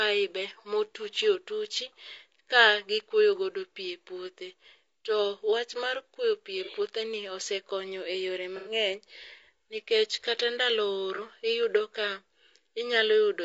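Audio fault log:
Throughout: low-delay AAC compression. The speech sounds rough and grainy, with noise between harmonics and a synthetic top band, likely from AAC-ELD's short frames at a low bitrate of about 32 kbps.
6.65–6.70 s: AAC frame loss with concealment. A brief smeared, noisy patch after "mar kuoyo pii e", where the decoder filled a missing chunk of about 30 ms from the last good spectrum.
8.57–8.71 s: AAC frame loss with concealment. A longer phasey, smeared stretch after "osekonyo e yore", about 90 ms of missing audio rebuilt from earlier spectrum, fitting three lost frames.
11.15–11.20 s: AAC frame loss with concealment. A short noisy blur between "nikech kata ndalo" and "iyudo ka", where about 30 ms was lost and patched from the previous spectrum.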